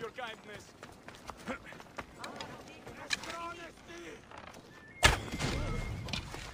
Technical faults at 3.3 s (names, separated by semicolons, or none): none